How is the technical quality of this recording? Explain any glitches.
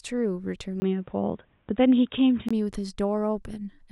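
The recording has one clear glitch. From 0.8 s to 2.51 s the speech turns dull and boxy, with nothing above 3.8 kHz, then clears again. A brief gap of about 20 ms at the switch, a level jump of a few decibels, and faint new background noise set this apart from a simple filter change, and likely point to the input switching to a poorer device.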